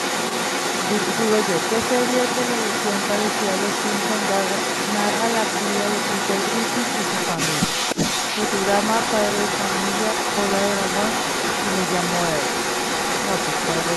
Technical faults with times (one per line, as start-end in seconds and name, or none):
0.00-13.96 echo leak